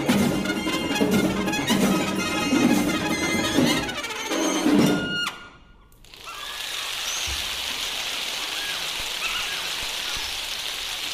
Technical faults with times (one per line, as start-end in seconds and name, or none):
0.00-11.14 audio read two samples at a time (double speed)